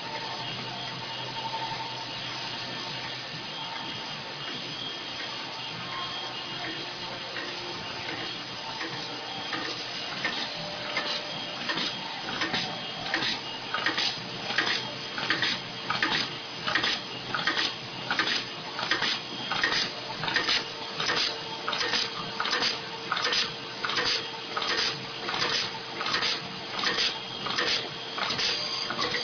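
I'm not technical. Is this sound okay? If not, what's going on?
Yes, it's fine; nothing wrong can be heard here.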